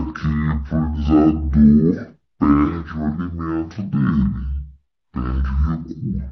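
From start to finish, the playback path treats a two-channel stream as stereo read as mono: left and right samples, which alternate in the data, are consumed in sequence as though they were consecutive samples of one channel. Every stretch of speech therefore takes twice as long to play, running at 0.5x speed and sounding a full octave (12 semitones) lower, with a faint mirrored copy of the sound folded into the upper half of the spectrum.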